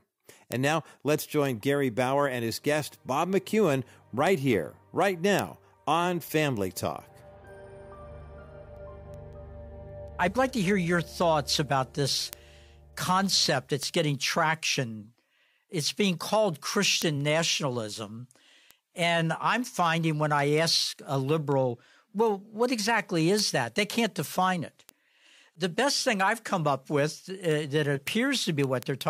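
From 0.15 s to 29.01 s the audio carries word clock ticks: sharp clicks of uneven strength recurring at a steady rate, roughly five per second, around 150 in all. Each marks a moment where a receiving device, running on its own clock rather than locked to the sender's digital link, slips one sample against the incoming stream. The spacing points to a clock mismatch of roughly 100 ppm, with each slip dropping or repeating a single sample.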